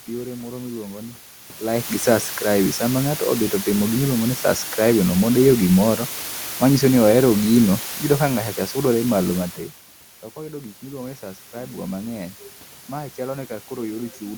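Throughout, low bit depth with dither leaves a constant, even hiss, loud relative to the speech. It fits about 5-bit quantisation. There is no grating distortion. From 7.91 to 8.75 s, automatic gain falling pulls the level down by about 4 dB. Speech and background sink together. From 10.52 to 11.82 s, automatic gain rising follows a drop of about 15 dB at the microphone. It restores about 4 dB, so speech and background swell together.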